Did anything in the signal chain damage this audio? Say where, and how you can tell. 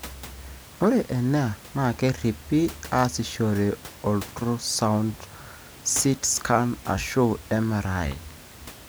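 No, nothing in the chain has damaged this speech; the only thing under it is the room's own background noise, sitting about 20 dB below the voice, which was captured at the microphone and isn't a system fault.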